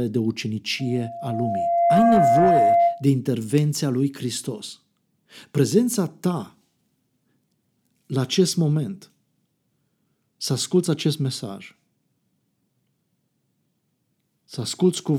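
From 0.79 s to 3.07 s, a loudspeaker feedback squeal rises over the speech: a single tone near 686 Hz that swells for about a second and then rings a few decibels above the voice. The microphone is picking up the loudspeaker it feeds, and at that one frequency the loop gain tops unity, so the tone reinforces itself. Its gradual self-building swell, rather than a fixed level from the outset, separates it from steady hum or tonal interference.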